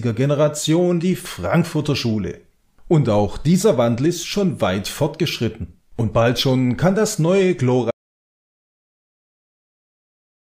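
An audio dropout to silence begins at 7.91 s and lasts to the end of the clip. The sound cuts off abruptly and is replaced by silence, with no background hiss or room tone underneath, for roughly the final two and a half seconds. The likely cause is that the input signal was lost, through a disconnection, a failed link or an accidental mute, while recording continued to write zeros, so whatever followed is missing.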